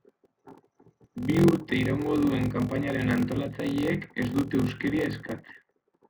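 A block size mismatch (padded) zero-fills each short block, fitting a 1024-sample read, so the speech buzzes at 43.1 Hz throughout and runs at 0.86 speed, timbre unchanged.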